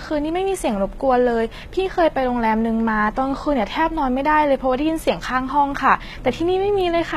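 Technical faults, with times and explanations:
Throughout, HE-AAC compression likely: treble above a lower core sounds copied, not recorded, so sibilants turn gritty and lispy, with nothing above 14.9 kHz, unlike plain lowpass dullness.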